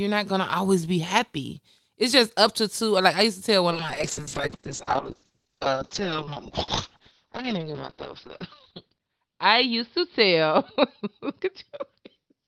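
From 3.73 s, just after "used to tell one", the speech turns rough and watery and loses its top end, with nothing above 6 kHz where it had reached 20 kHz. This is a call bitrate drop that lasts to the end. The encoder was pushed to far fewer bits, which fits a fall from about 32 to 6 kbps, and it held the lowest rate for about 4.7 s.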